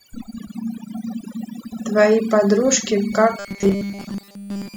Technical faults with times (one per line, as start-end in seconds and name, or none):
0.00-4.77 switching supply whistle
0.00-4.77 overdone noise removal
3.39-4.77 robotic sound from repeated short buffers